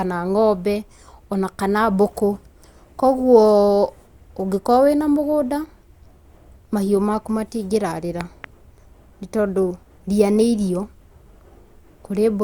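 At 8.21 to 8.46 s, a loud pop occurs as two sharp thumps well above the speech level, likely from a voltage pulse such as a switch or static discharge.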